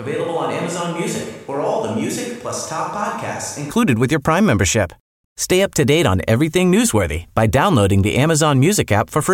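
From the start of the clip until 3.71 s, just before "with your", the speech sounds roomy and hollow, thin in the bass, about 10 dB quieter, with room noise sitting roughly 30 dB below the speech. This is a switch to a distant microphone, likely caused by the close microphone's signal dropping out so that a pickup further from the talker carries the sound. At 3.71 s the close, fuller sound returns abruptly.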